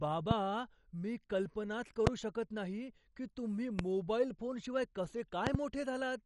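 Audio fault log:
throughout, MP2 compression: the speech sounds dull, with nothing above 11.3 kHz and a gurgling, granular roughness as sub-bands starved of bits drop in and out. The damage is plainly audible and likely comes from MP2 at a low rate, fitting roughly 48 kbps. Unlike a simple low-pass, the band flicker adds watery grain.
0.31–0.33, 2.07–2.09, 3.79–3.82 and 5.47–5.57, loud pop: sharp single pops, with a quick double pop in the last, stand about 20 to 25 dB above the speech, which carries on underneath. These are likely electrical pulses such as switching or static. Unlike a dropout or click train, nothing is lost.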